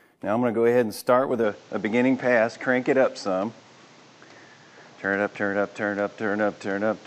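At about 1.44 s the input was likely switched to a poorer device, and the audio stays on it to the end. From that point nothing reaches above 8 kHz, so the sound turns duller, with no gap, no level jump and a faint new background noise.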